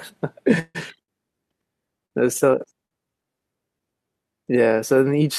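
From 0.59 to 0.77 s the speech stops moving forward in a call audio freeze. The last sound is carried on as a fading buzz or hiss for about 150 ms and then drops to roughly 20 ms of silence before the speech resumes exactly where it left off, with nothing lost. The likely cause is packets held up in transit, draining the jitter buffer. This adds about 150 ms of delay rather than cutting anything out.

Three short stalls from a late packet follow, at 1.03 to 1.10 s, 2.06 to 2.13 s and 2.86 to 2.93 s. Each lasts about 50 ms. In each one the current sound is held a little too long, with a faint buzz or dip, until the missing packet arrives. The speech then continues from the same point. What separates these from the freeze is that they are brief and never fade into silence. Each one adds only its own 50 ms or so of delay.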